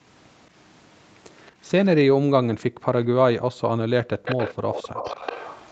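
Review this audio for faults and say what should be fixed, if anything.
A delayed copy of the speech trails the original by 220 ms. It is barely audible at 1.4–1.51 s and 1.68–1.72 s, then clearly louder at 4.25–4.54 s and from 4.73 s to the end. This is likely an echo leak: the far side's loudspeaker output reached its microphone, and its echo canceller let part of it through and back into the call. Using headphones on that end, or retuning its echo canceller for stronger residual suppression, would stop the returning copy.

The room background abruptly drops out, by as much as about 40 dB, at 2.7–2.86 s and again at 4.6–4.64 s, then snaps back. This is background gated by the echo canceller, which pulled the microphone down hard while the loudspeaker was playing. Gentler suppression combined with comfort noise would keep the background steady through these moments.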